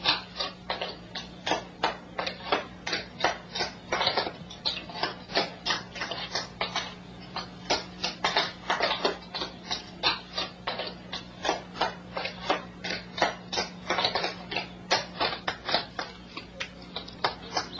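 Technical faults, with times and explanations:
Nothing stood out on listening; no technical fault could be heard anywhere in the recording.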